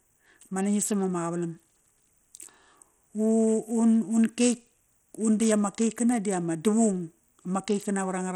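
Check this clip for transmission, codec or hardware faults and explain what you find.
The speech is degraded throughout by what is likely Bluetooth SBC compression, at a low rate consistent with about 80 kbps. Starved of bits, the upper sub-bands lose the treble, which drops out and flickers, while coarse quantisation leaves a plainly audible gritty noise and aliasing riding on the sound.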